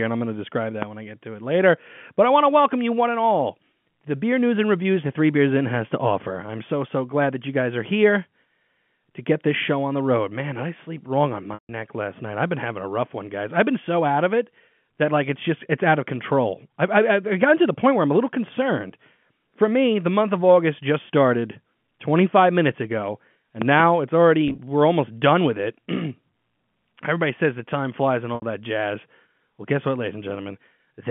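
At 0.82 to 0.85 s, just after "I'm going to describe", a single loud pop lands on the telephone-band speech, well above its level. It is likely a voltage transient from a switch, plug or static, and the speech continues underneath. At 23.62 to 23.82 s a second loud pop event gives two thumps in quick succession.

Packet loss with pitch repetition appears at 11.54 to 11.69 s, between "I sleep wrong on" and "last night I've been". About 150 ms is missing, which fits 10 ms packets. The receiver held the last pitch period, fading it to silence before the speech returns. At 24.48 to 24.58 s the losses are scattered, 60 ms over 100 ms in runs of up to 20 ms, giving brief buzzy holds. At 28.35 to 28.42 s, after "the time flies and" and before "that jazz", a 70 ms gap sounds held and then fades.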